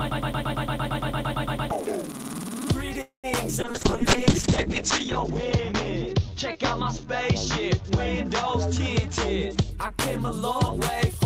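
Right from the start the clip is already stuck in a broken-record loop. A 114 ms fragment plays back to back about 14 times, running until 1.71 s, so you hear a rapid stutter with the identical chunk repeating exactly. The likely cause is a player or stream that stalled and kept re-sending the last piece it held. Whatever should have played during that 1.7 s is simply gone.

At 3.01 s there's a call audio freeze lasting to 3.27 s. The last bit of sound is stretched into a short fading buzz, then roughly 120 ms of silence, for about 223 ms of filler in total. The likely cause is packets held up in transit so the jitter buffer ran dry. When they arrive, the audio resumes exactly where it stopped. Nothing is lost, but everything after it now runs about 0.22 s later.

Then at 3.62 s a call bitrate drop sets in and lasts until 9.77 s. The encoder's rate falls from 32 kbps to 6 kbps after the bandwidth estimate collapsed. 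Besides coding everything more coarsely, it narrows the audio band from 20 kHz down to 8 kHz, so the top end disappears. The sound turns muffled and rough, a bit watery, and is at its worst for about 1.35 s at the bottom before it climbs back.

Just inside that, from 3.72 to 3.76 s, there's a skip ahead. Around a tenth of a second of audio was dropped while later material was already queued, and only about 13 ms of filler bridges the jump. The two sides butt together almost directly, so you hear a small abrupt lurch forward. It also claws back roughly 100 ms of the delay the freeze added.

From 6.19 to 7.70 s the jitter buffer slow-down kicks in. The receiver wanted more in reserve, so it repeated single pitch periods and slivers of pause over and over. That adds about 100 ms and plays the stretch at 94% speed. The pitch stays put, so it just sounds drawn out and a touch sluggish.

Finally, from 9.52 s to 11.18 s there's a jitter buffer speed-up. 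This is the opposite move: the buffer held more than its target, so the receiver snipped out short pitch-period chunks, about 40 ms in all. Playback runs at 102% with the pitch unchanged. It's subtle, and it overlaps the last quarter-second of the low-bitrate stretch.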